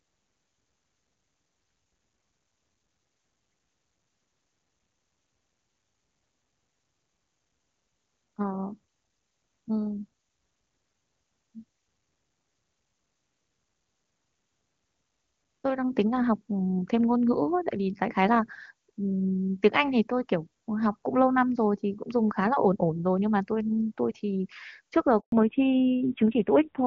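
A speech recording carried over a phone call, with two faults near the end. At 25.20 s there is a handover gap. The call switches networks and no speech frames arrive. The voice drops out within a few tens of milliseconds and stays silent for 120 ms, until 25.32 s. Whatever was said in that window is gone. From 25.32 s to the end, the call shows a fallback to narrowband. Before this, HD Voice runs at a rate that sounds like the top AMR-WB mode, with clear, wideband speech. After the switch, nothing above 4 kHz remains. The voice loses its air and crispness and turns dull and rough. That roughness points to a low-rate narrowband mode around 7.4 kbit/s. The switch to the older codec coincides with the network change, so the handover is the likely trigger.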